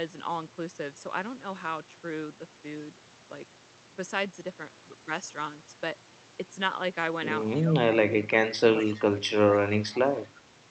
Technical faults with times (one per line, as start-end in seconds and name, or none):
7.60-8.32 speech suppressed in double talk
8.74-8.92 speech suppressed in double talk
8.90-9.01 echo leak
9.47-10.00 speech suppressed in double talk
10.30-10.44 speech suppressed in double talk